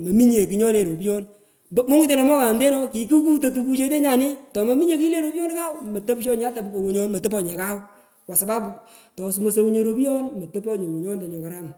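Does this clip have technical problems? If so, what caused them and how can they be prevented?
No, nothing stood out as a technical problem on listening, so there is nothing here that needs preventing.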